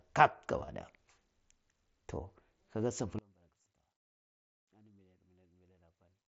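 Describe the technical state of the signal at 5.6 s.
At 5.6 s the speech has all but disappeared, sitting about 30 dB down as a faint residue. This runs from 3.19 s to the end of the clip. The likely cause is one channel inverted: with reversed polarity, the shared centre content cancels when the channels are summed to mono.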